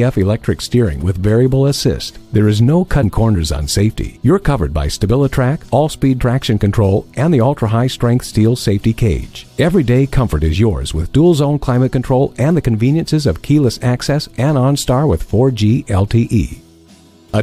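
At 3.02 s the audio jumps forward. Compressed frames were skipped, so roughly 70 ms of sound never plays, which points to about three frames of 23.2 ms each. At 6.2 s it happens again on a smaller scale. Around 20 ms drops out, consistent with a single frame.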